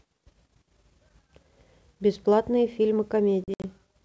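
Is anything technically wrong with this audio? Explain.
Yes, there's packet loss on an ADPCM call between about 3.44 and 3.65 s in this G.722 wideband clip. Around 120 ms goes missing as several hard-edged silent holes spread over 200 ms, the longest about 60 ms. Each gap knocks the decoder's predictor and step size out of step with the sender's, so the speech returns with clicks, slight distortion or a wrong level before settling.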